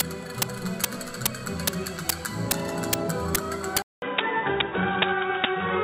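At 3.82 s there's a short gap, about 200 ms of silence, and from there to the end the sound changes character: nothing above 3.8 kHz, a different noise floor sitting roughly 45 dB under the signal, and a level shift of around 5 dB. That combination points to the input switching to a poorer device, likely another mic or a headset's call profile taking over, with its own narrower band, tone and background.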